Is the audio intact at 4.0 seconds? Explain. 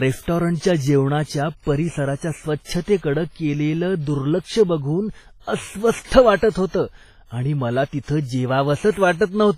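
No. At 4.0 s, as across the whole clip, the speech shows WMA compression damage, likely from a low-bitrate encode around 24 kbps. Quantisation noise smeared over long transform blocks gives a ringing, washy sound with hiss that breathes with the signal, and nothing above 15.4 kHz.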